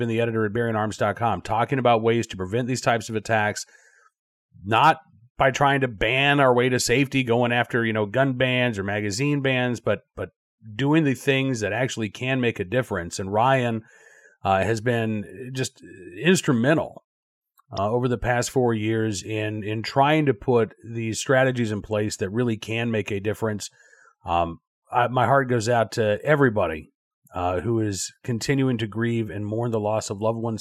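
At 17.77 s there are compressed frames skipped. Frames never got decoded, either missing or rejected as damaged, so the speech jumps ahead by around 20 ms. You hear it as a tiny hiccup where the audio on either side gets stitched together.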